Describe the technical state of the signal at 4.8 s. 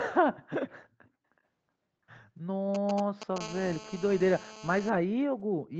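At 4.8 s the signal carries GSM phone buzz, which runs from 3.41 s to 4.90 s and so is near its end here. A nearby 2G handset in a call transmits bursts at about 217 Hz, and the audio circuitry rectifies those radio pulses into the signal. The result is a hard, raspy, steady buzz at 217 Hz, dense with harmonics, at about 15 dB below the speech and unrelated to it. Above 8 kHz the harmonics are absent because the call path carries nothing above that frequency.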